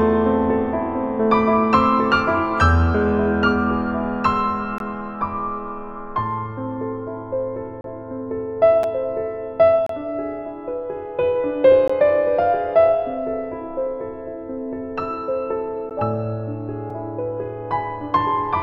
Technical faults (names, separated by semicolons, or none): gap between stream segments